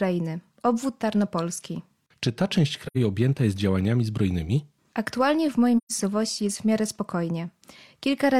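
Around 2.87 to 2.97 s, just after "ta część", and again at 5.77 to 5.92 s, after "w mojej", AAC frame loss with muting leaves soft-edged gaps. The decoder zeroes the missing frames, and the overlapping windows fade the sound out and back in.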